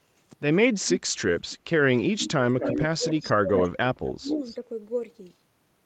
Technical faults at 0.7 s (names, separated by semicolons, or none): none